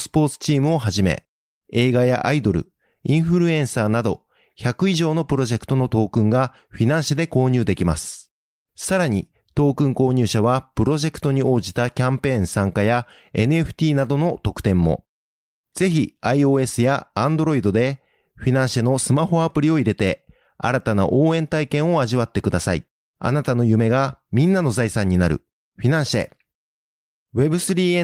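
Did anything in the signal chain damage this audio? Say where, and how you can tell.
No, nothing in the signal chain damaged this speech.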